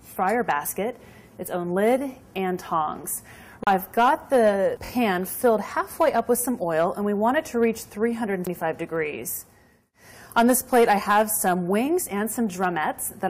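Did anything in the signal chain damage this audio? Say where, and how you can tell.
Yes. Three kinds of damage can be heard, from three different stages.

Hard clipping runs through the whole clip, from a converter or sample-format stage driven about 9 dB past its ceiling. Only a small fraction of samples, under one percent, reach the limit, so it comes through as crackle and grit on the loudest peaks. On the waveform those peaks are sliced flat. On a spectrogram each one throws a thin vertical streak of harmonics reaching up into the high kHz range.

The CD skip, a playback fault, happens twice: at 3.64 to 3.67 s and at 8.46 s. A knock or disc flaw knocked the laser onto another turn of the spiral. The player muted for about 30 ms the first time and much more briefly the second, then resumed from a different point. Each event sounds like a tick followed by a jump in continuity. The waveform shows a short gap of silence with a mismatched join, and the spectrogram shows a narrow blank column.

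Repeated frames occur at 4.84 to 4.89 s, from storage or transmission of the coded stream. One 23.2 ms compressed frame was delivered and decoded three times in all, so that slice plays twice more than it should and the audio runs 46.4 ms longer. It sounds like a quick stutter. On a spectrogram the same short pattern appears tiled side by side.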